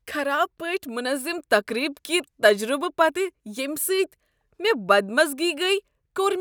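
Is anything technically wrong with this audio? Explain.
No, nothing technically wrong stood out on listening to this speech recording.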